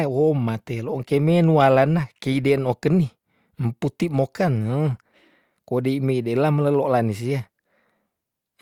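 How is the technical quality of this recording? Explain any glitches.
No technical faults are audible anywhere in this speech recording, so there are no glitches to explain.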